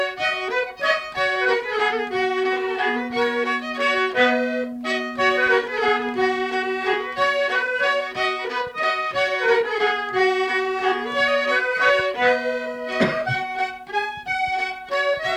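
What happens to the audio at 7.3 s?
Nothing goes wrong at 7.3 s. The audio plays through that moment intact, with no dropout, click or other fault.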